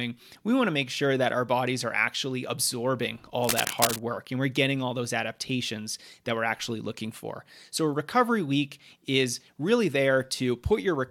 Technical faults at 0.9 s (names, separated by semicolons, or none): none